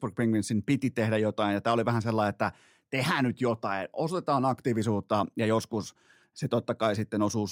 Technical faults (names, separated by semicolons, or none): none